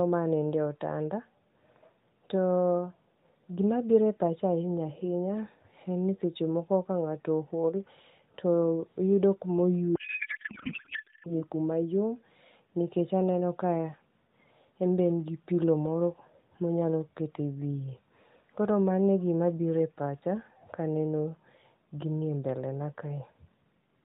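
From 9.96 to 11.35 s, a codec payload misread scrambles the AMR narrowband stream. The sound fits octet-aligned frames being unpacked as bandwidth-efficient, turning the speech into garbled, warbling noise that barely tracks it.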